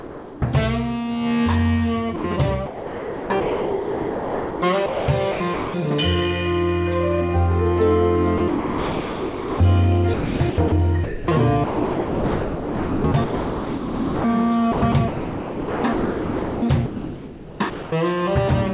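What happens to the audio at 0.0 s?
From the very start until 0.42 s, the opening sound is missing: in its place is steady noise or near silence, and the real audio only begins once that stretch ends, with about 400 ms of it lost. This is likely sound dropped by the voice detector, where the sender's voice activity detection judged the opening as background and stopped transmitting, so the receiver filled the gap with synthetic comfort noise until detection triggered again.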